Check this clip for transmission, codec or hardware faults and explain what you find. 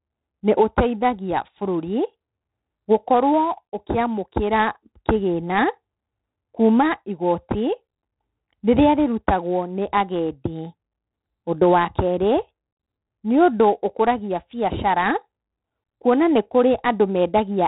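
One codec fault runs through the whole speech clip: heavy 4-bit ADPCM compression. Each sample is coded as a coarse 4-bit step from a prediction, so a gritty hiss rises and falls with every loud syllable, and sharp onsets distort. Nothing reaches above 3.9 kHz, which points to a 32 kbps stream. Unlike MP3-style artefacts, the noise tracks loudness directly rather than swirling or warbling.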